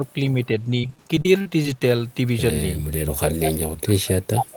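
From 0.0 to 0.15 s and again from 0.34 to 0.69 s, the speech dips slightly in short patches. This is speech suppressed in double talk. Both ends were likely talking at once. The echo canceller could not tell the near talker from its own loudspeaker echo. It turned everything down a little as a precaution. The dips are mild and brief each time.

From 0.81 to 1.82 s comes repeated packet loss with a robotic sound. Audio went missing again and again, with the longest hole about 40 ms. Each hole was patched by stretching the last bit of sound. About a fifth of this second is such patching. The result is choppy, with small pieces of speech missing.

From 3.07 s to the end, speech suppressed in double talk returns, far more severely. The same confusion between talker and echo likely drives the level down hard. At its worst the speech is nearly gone.

Inside that stretch, from 4.38 to 4.45 s, there is an echo leak. 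A short scrap of earlier speech returns about 460 ms late. It is only slightly quieter than the speech itself. Residual loudspeaker pickup was likely not fully cancelled and was sent back.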